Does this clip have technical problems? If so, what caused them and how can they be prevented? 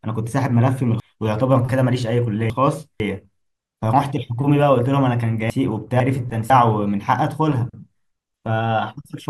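Yes. Chunks out of order occur from 1.0 to 3.0 s, where one 500 ms chunk plays after the three that should follow it, and from 5.5 to 6.5 s, where two adjacent 500 ms chunks swap places. The speech sounds jumbled, with three hard joins in each span. On a waveform these joins appear as sudden steps, and a spectrogram shows vertical discontinuities at the joins. Tagging chunks with sequence numbers and reordering them in a jitter buffer before playback or writing prevents this.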